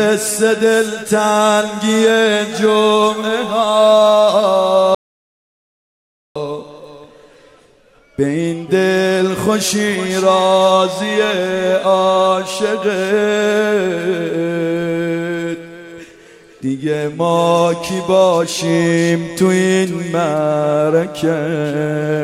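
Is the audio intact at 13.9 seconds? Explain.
Yes, the audio is intact at 13.9 seconds, with no dropout, click, distortion or other fault at that moment.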